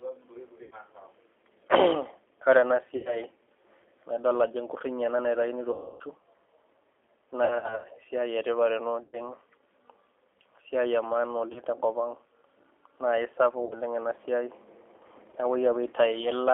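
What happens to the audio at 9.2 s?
Just before 9.2 s, VoIP packet loss concealed by the speech codec ends. The gap runs from about 9.03 to 9.18 s. Around 100 ms of audio is missing, which fits five lost 20 ms packets. The decoder fills the hole by repeating its last pitch and vocal-tract filter, with the gain lowered each frame. The result is a buzzy tone or coloured noise that fades. Each frame depends on the one before, so the speech is still weak or distorted at 9.2 s as it recovers.

The whole clip also passes through the G.729 codec, at 8 kbit/s on a 300 Hz to 3.4 kHz line. It rebuilds speech from a filter, a pitch predictor and a few pulses per frame. Nothing above 3.4 kHz survives. The damage is plainly audible as a rough, synthetic quality.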